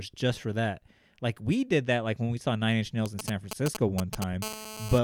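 From 3.06 to 4.24 s, GSM signalling bursts break into the speech. A nearby 2G phone is signalling, sending short groups of radio pulses. The audio circuit rectifies them. The result is a galloping run of ticks and brief 217 Hz buzzes, nearly as loud as the speech.

From 4.42 to 4.99 s, a steady GSM phone buzz follows. The phone is now in a call, transmitting continuously at 217 bursts per second. Rectified, this becomes a hard, raspy 217 Hz buzz rich in harmonics. It sits about 10 dB below the speech.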